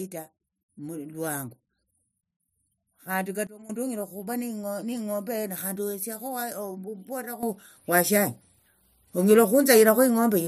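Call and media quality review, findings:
Sudden gain jump: level and noise floor drop about 16 dB, 3.47–3.70 s, before "onyala okhuva"; rise about 12 dB from 7.43 s to end. Likely an unramped digital gain step.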